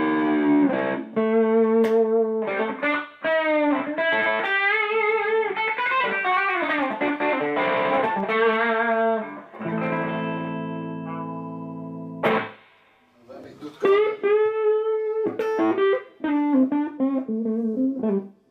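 Nothing in this audio stands out as a technical problem; it sounds just the way a straightforward recording should, with nothing to flag anywhere along the way.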